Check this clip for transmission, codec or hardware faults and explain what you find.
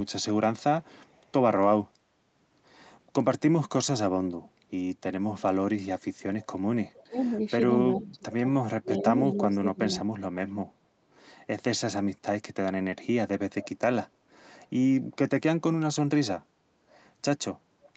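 Two fault types stand out: an echo leak returning a faint delayed copy of the talker, and speech suppressed in double talk.

Echo leak at 0.83–1.32 s, 6.41–7.03 s and 7.99–8.07 s: a quiet, 410 ms delayed copy trails the talker, likely a far-end loudspeaker echo the canceller missed.

Speech suppressed in double talk between 7.04 and 10.62 s: the voice dips by up to about 30 dB for roughly 1.5 s in total, likely the echo canceller attenuating both sides during overlapping talk.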